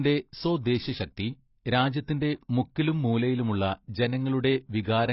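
Throughout the speech, everything above about 5.6 kHz is missing, leaving sibilants dull and smeared with a fizzy, warbling texture. On a spectrogram there's a hard ceiling and patchy holes below it. This points to heavy AAC compression, likely AAC-LC at around 16 kbps.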